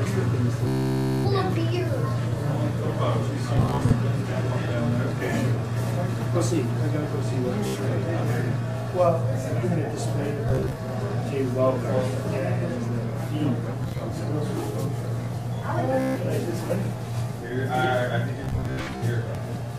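Buzzy, machine-gun stutters break the audio at 0.67–1.27, 3.57–3.93, 7.67–7.79, 10.49–10.82, 13.84–14.01, 16.00–16.17 and 18.44–19.04 s. This is Bluetooth stutter: lost packets make the receiver replay short slices before playback jumps ahead.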